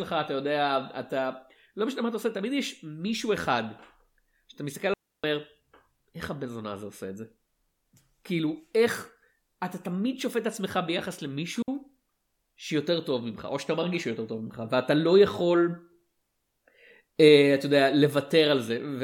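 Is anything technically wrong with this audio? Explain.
Yes, there are two digital wireless dropouts in this speech. The first runs from 4.94 to 5.24 s, about a 0.3 s hole, and the second is a brief 60 ms gap at 11.62 s. In both, the wireless link lost too much data, so the receiver muted rather than play garbage, fading down very quickly. You hear a clean drop to near silence with no crackle or noise burst on either side.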